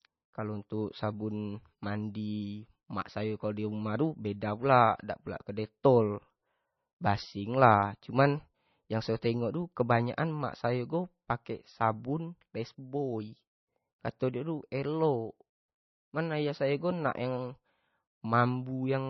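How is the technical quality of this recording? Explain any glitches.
Technical quality is poor: heavy MP3 compression runs through the whole recording. The speech has no content above about 5.9 kHz, so it sounds dull, and the remaining detail swirls and warbles. Sibilants turn into metallic chirps, and consonant onsets smear. The sound points to a very low bitrate, roughly 24 kbps. When bits run that short, the encoder cuts the treble and switches weak frequency lines on and off between frames. On a spectrogram this shows as a hard ceiling near 5.9 kHz and patchy, flickering holes below it.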